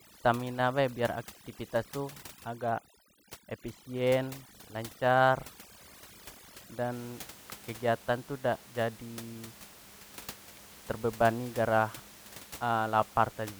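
From 0 to 6.93 s, overdone noise removal: an over-strong noise reducer mutes frequency bands near its noise estimate, taking quiet speech detail along. The background drops and breaks up into twinkling specks. A spectrogram shows scattered isolated dots and gappy, hollowed harmonics.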